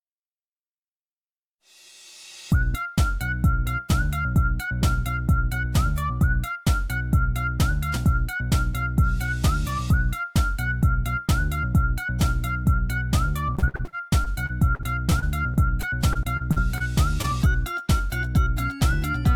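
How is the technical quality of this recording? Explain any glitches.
The recording has two glitches, both caused by audio data failing to arrive in time near the end.

From 13.55 to 16.82 s there is repeated packet loss, giving a robotic sound. Packets kept going missing or arriving late, and each time the receiver covered the hole by extending the last sound before moving to the next gap. There are around twenty such holes, the longest about 56 ms, with roughly 15% of the stretch filled in. The result is choppy audio with pieces dropped out.

At 17.22 to 17.26 s there is short concealed packet loss. About 20 ms of data never reached the decoder, so the receiver continued the preceding sound, voiced or noisy, across the gap and then blended back into the real signal. This is heard as a brief smear or wobble, and a very short sound in that spot can disappear.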